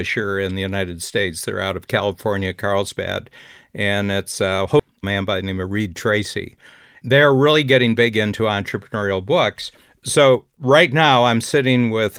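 A speech clip in which audio was dropped and playback was then hurried. At 4.79 to 4.81 s, just after "and it's a", a skip ahead occurs: about a second and a half of speech was dropped, so playback jumps forward with no gap and the two sides are butted together. Jitter buffer speed-up follows, as the receiver trimmed excess queued audio by cutting out short pitch-period pieces repeatedly. From 4.91 to 8.53 s it runs at 109% speed, shedding around 0.3 s. From 8.95 to 9.32 s it runs at 110%, and from 9.99 to 11.16 s at 107%. The speech sounds rushed but keeps the same pitch.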